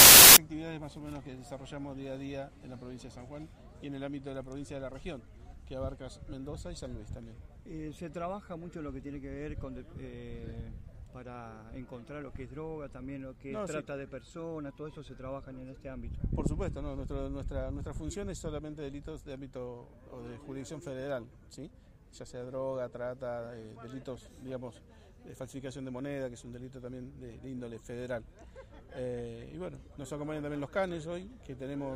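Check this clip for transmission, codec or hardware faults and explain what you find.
There's one clear fault, right at the top. From 0.0 to about 0.37 s you get file tags played as audio: an embedded cover picture has been read as if it were sample data. Because the image is compressed, its bytes look essentially random, so they come out as very loud white noise, a loud burst of static with hard edges at both ends, before the actual audio begins.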